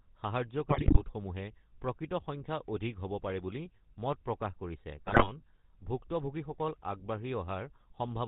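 Speech, and the whole thing has gone through the GSM full-rate codec. That buzzy, gravelly texture is plainly audible all the way through. It comes from the codec rebuilding the voice from a vocal-tract model driven by a sparse, regularly spaced pulse excitation, and the band stops at 4 kHz so everything sounds boxed in. It's consistent with the old 13 kbps full-rate mode. On top of that there are two bursts of GSM bit errors, from 0.70 to 1.02 s and again from 5.06 to 5.30 s. In both the voice breaks up into squawks, pops and gargling. Corrupted bits are landing in the decoder's filter, pitch and gain parameters, so the spectrum gets bent and the level jumps frame by frame. What you hear points to a weak link with something like 5 to 6 percent of bits flipped, hitting 15 frames in the first burst and 9 in the second.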